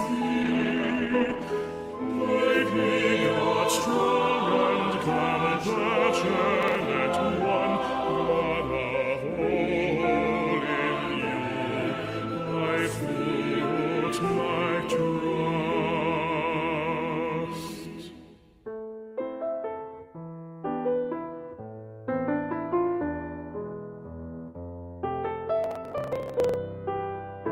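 From 0.45 to 1.53 s, a call bitrate drop takes the encoder from 32 to 14 kbps. Coarser coding makes the sound rough and dull. Processor overload crackle follows at 6.63 to 6.85 s and again at 25.64 to 26.54 s. Missed deadlines skip short buffers, leaving gritty tearing.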